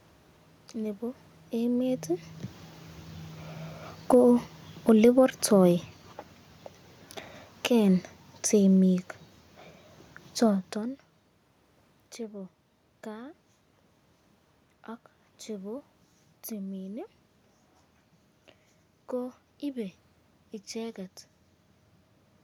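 From 1.54 s to 9.10 s the automatic gain control is falling. It judged the input too loud, or its background noise too strong, and cut its gain gradually, by about 9 dB. The speech sinks steadily, and the room noise sinks with it.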